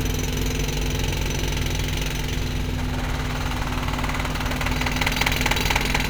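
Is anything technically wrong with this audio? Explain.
Yes. Throughout, there is mains hum: a ground loop or nearby transformer is leaking the 50 Hz power line into the signal path, laying a steady low drone with some low harmonics under the sounds, at nearly the same loudness as the sounds themselves.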